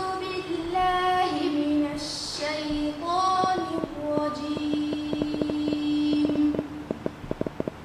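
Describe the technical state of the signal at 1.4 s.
At 1.4 s the signal is intact, with no audible fault at that moment.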